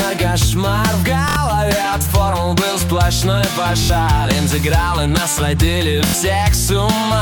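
At 1.29 to 1.36 s, 3.83 to 3.90 s and 6.07 to 6.14 s there's Bluetooth stutter: late or lost packets make the receiver repeat its last buffer for about 70 ms, which fits roughly three dropped packets, giving a brief buzzy judder before the audio jumps ahead.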